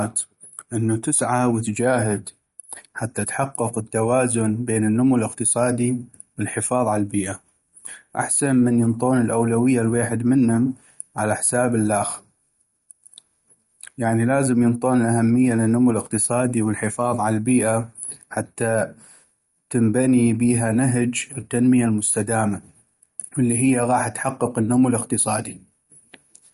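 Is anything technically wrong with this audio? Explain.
Yes. The speech carries plainly audible coding damage from start to finish. This is likely MP3 compression. Nothing is heard above 11.2 kHz, so the treble stops abruptly. That cut-off and the damage level point to a low bitrate, around 51 kbps. With so few bits, the encoder drops the top band and zeroes weak frequency lines. Those lines flicker on and off between frames. The result sounds watery and swirly, with metallic chirps on s sounds and smeared attacks.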